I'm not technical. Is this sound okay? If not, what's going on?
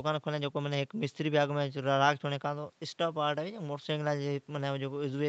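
Yes, no faults here.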